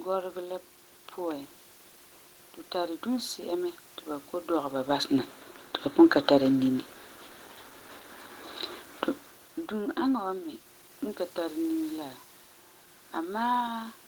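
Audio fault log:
No system faults detected.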